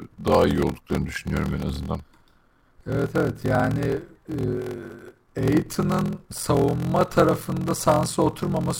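Block size mismatch (padded) runs through this speech clip from start to finish, heard as a steady 43.1 Hz buzz under the speech. One stage writes blocks shorter than the next stage reads. The shortfall is filled with zeros, so every block carries a brief silent gap. The buzz rate fits 1024-sample reads, and the speech plays at 0.861 times normal speed with its timbre kept.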